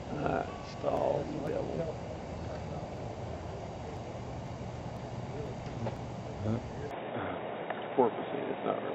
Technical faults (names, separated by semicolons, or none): input switched to a poorer device